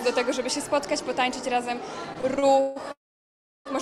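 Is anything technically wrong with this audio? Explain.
Yes, there are two faults.

From 2.13 to 2.78 s there are repeated stalls (stutter): five short gaps, the longest 155 ms, where late packets emptied the jitter buffer. Each is filled by continuing the last sound, faded in the longer waits, so the audio drags. A spectrogram shows smeared, repeated frames.

From 2.92 to 3.67 s there is a call audio freeze: 737 ms of filler, most of it silent. A brief fading buzz or hiss is followed by a flat waveform and an empty spectrogram, likely caused by packets held up in transit.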